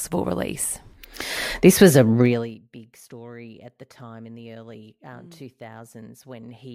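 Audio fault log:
2.22–2.59 s, zipper noise: Just after "was a", the level drops by about 25 dB in 1 dB steps at roughly 70 steps a second rather than along a smooth curve, finishing before "big story at the". Each step is an instant jump in gain that puts a small discontinuity in the waveform, so the fade carries a rapid ticking buzz for its 0.37 s. The step rate points to gain being updated once per processing block without interpolation.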